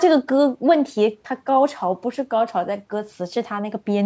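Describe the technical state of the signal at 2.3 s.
At 2.3 s the speech is intact, with no fault present, only the expected thinning of the lowest bass and the absence of content above 8 kHz that come from the call's microphone processing.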